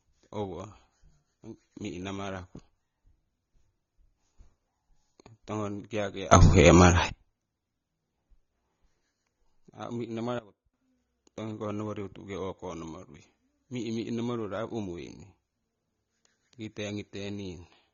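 Throughout, the speech carries AAC compression, likely at a low bitrate near 24 kbps. Nothing survives above 6.9 kHz. The result is dull, smeared and warbling.

From 6.32 to 7.09 s, a sudden gain jump lifts voice and background together by about 24 dB. From 10.39 to 10.74 s, they drop by about 19 dB. These are likely unramped gain steps.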